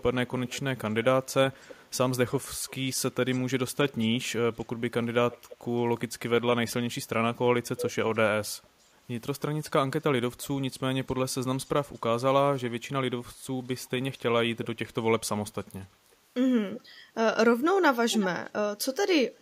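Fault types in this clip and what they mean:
echo leak: a delayed copy of the speech trails 340 to 360 ms behind in patches, sometimes fairly loud, sometimes barely there, likely from a speakerphone whose echo canceller lets some through.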